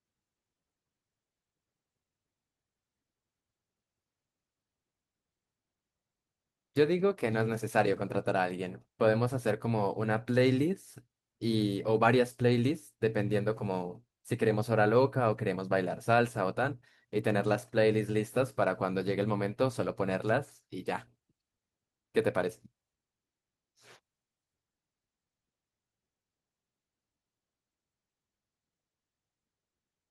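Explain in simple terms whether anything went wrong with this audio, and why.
Listening to this speech recording, nothing stood out as having gone wrong.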